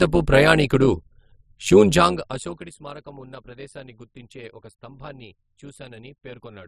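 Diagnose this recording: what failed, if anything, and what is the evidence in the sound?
A metallic buzz runs through the speech throughout, pulsing at around 100 Hz with level swings of about 11 dB. This is overlap-add ripple in frame-based processing: windowed frames were rejoined with an overlap that doesn't sum flat, so gain dips once per frame.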